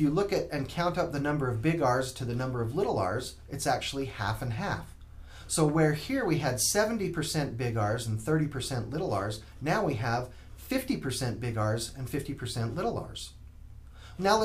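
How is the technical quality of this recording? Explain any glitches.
No technical faults are audible.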